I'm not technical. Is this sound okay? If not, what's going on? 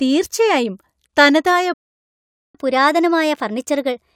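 No. At 1.74 s the speech cuts out and there is silence until 2.55 s, a gap of about 0.81 s. This is a playback stall: the player most likely ran short of incoming audio, or was briefly held up, and had nothing to play.

From 2.55 s to the end, the speech runs fast and sounds a little high, about one and a half semitones up. This is catch-up at higher speed: the player plays at 1.1 times normal speed to win back the time it lost.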